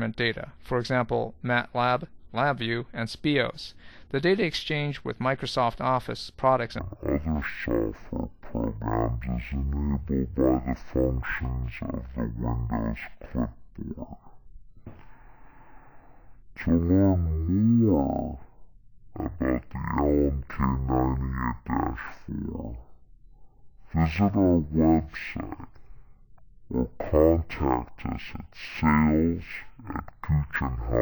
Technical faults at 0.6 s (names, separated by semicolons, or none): none